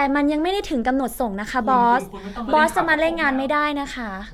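A short bit of speech, and nothing technically wrong turns up anywhere in it.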